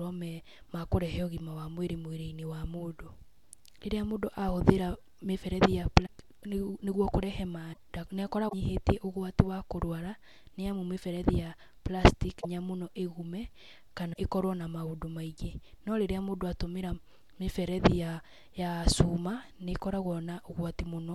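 A broken MP3 bit reservoir is the likely cause of five brief disruptions in this speech, at 6.05–6.08 s after "mĩberethi ya", 7.72–7.77 s, 8.48–8.54 s, 12.40–12.45 s after "amu mĩberethi ya plastic", and 14.12–14.17 s just before "ĩkorwo na". Each lasts roughly 35 to 60 ms, about one to two 26 ms MP3 frames. After frames drop out, the next frame looks back for borrowed bits and decodes bytes belonging to another frame, so the audio skips ahead through a short chirp, burst of noise or gap.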